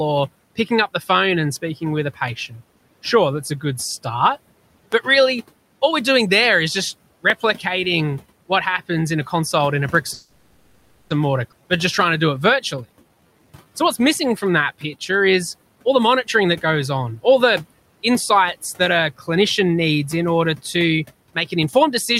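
At 4.92 to 4.95 s and again at 7.30 to 7.32 s, a loud pop cuts in, about 20 dB then about 15 dB above the speech. A voltage spike is the likely cause.

From 10.13 to 11.11 s, a call audio freeze holds the last sound as a fading buzz or hiss for 0.97 s. Delayed packets likely emptied the jitter buffer. Nothing is lost, but the speech resumes late.

At 11.51 s, the audio skips ahead. Roughly half a second is dropped, and the two sides are joined almost directly.

From 11.62 to 14.24 s, a jitter buffer slow-down repeats pitch periods. Speech runs at 92% speed with unchanged pitch, adding 226 ms.

From 15.75 to 16.67 s, a jitter buffer speed-up trims pitch periods to cut delay. Speech runs at 107% speed and sounds hurried, losing about 70 ms.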